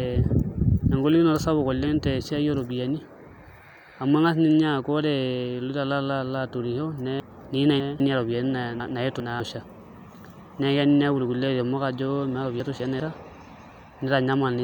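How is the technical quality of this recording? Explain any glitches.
The speech is interrupted three times by brief garbled, jumbled moments, at 7.2 to 8.0 s, 8.8 to 9.4 s and 12.6 to 13.0 s. These are chunks out of order. In each case a 200 ms block of audio arrived late and plays after the blocks meant to follow it: three blocks late in the first, two in the second and one in the third. Nothing is missing, but the sequence is scrambled, with hard joins where the blocks meet.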